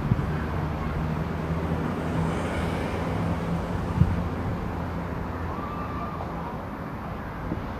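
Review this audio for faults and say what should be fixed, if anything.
Vorbis compression, throughout: the treble is hissy and grainy with nothing above 14.2 kHz, likely from low-bitrate Vorbis encoding, around 35 kbps, coarsely quantising high-frequency detail into noise. Encode from the original at a higher Vorbis quality setting, or keep a lossless master for distribution.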